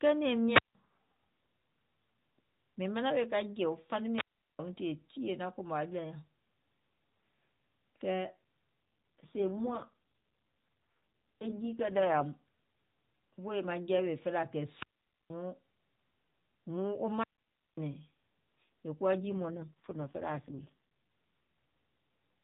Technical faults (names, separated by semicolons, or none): wireless microphone squelch dropout; AMR rate drop